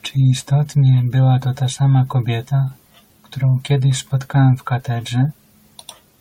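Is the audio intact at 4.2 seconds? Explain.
Yes, the speech at 4.2 seconds is intact, with no dropout, click, distortion or other fault at that moment.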